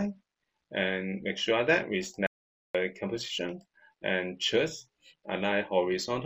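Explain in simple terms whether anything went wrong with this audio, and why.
The input feeding the recorder was likely lost for a moment, through a loose connection or a brief mute, while recording carried on. That causes an audio dropout to silence: from 2.27 to 2.75 s, about half a second, the sound cuts out to dead silence, with no background left.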